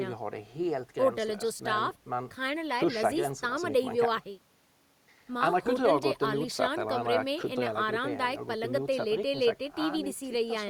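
Nothing in this bit of speech stands out as a technical fault; it just runs along without anything going wrong along the way.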